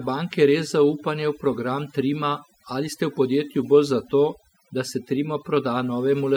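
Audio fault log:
Throughout: overdone noise removal. Noise reduction set too strong silences frequency bands near the noise floor, leaving twinkling specks in the background and taking quiet parts of the speech with them.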